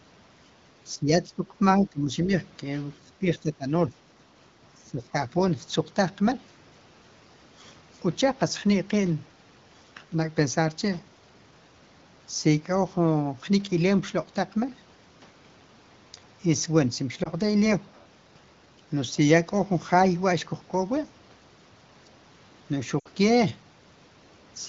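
Between 0.95 and 5.15 s, at 0.95–1.55, 1.77–2.33, 3.05–3.21, 3.38–3.66 and 4.77–5.15 s, speech dips by up to about 20 dB. This is likely speech suppressed in double talk: gated pieces rather than smeared glitches. Then come lost AMR speech frames: a brief 20 ms warble at 17.23 s, and at 23.00–23.08 s a 60 ms loss where the sound drops to near silence within two frames, concealed by the AMR-WB decoder, not a hard silent gap.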